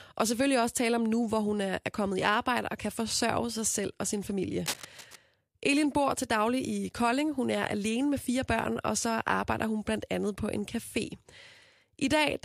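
A speech recording with a burst of cable scratch noise from 4.65 to 5.16 s, just after "selv og sin familie". For about half a second, a dense, uneven scratching and rustling sits over the audio at roughly 10 dB below the speech. The likely cause is a worn cable, connector or control being moved, so that its contact resistance fluctuates rapidly and injects irregular noise into the signal.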